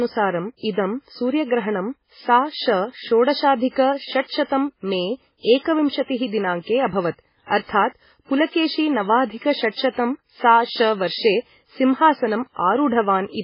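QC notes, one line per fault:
Throughout, MP3 compression: heavy watery, swirling artefacts and nothing above 5.3 kHz, likely an encoder short of bits zeroing weak frequency lines, which fits about 16 kbps.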